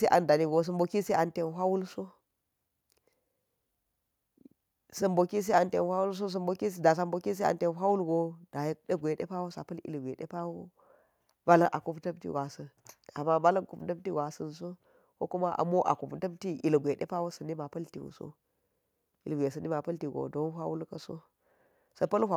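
No technical faults are audible anywhere here.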